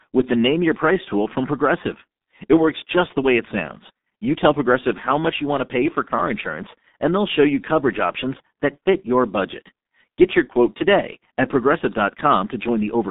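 G.723.1 codec damage runs throughout the clip. The speech passes only a telephone band of about 200 Hz to 3.7 kHz, with nothing above 3.8 kHz. The heavy coding, which fits a rate near 6.3 kbit/s, leaves it muffled and hoarse, with smeared consonants.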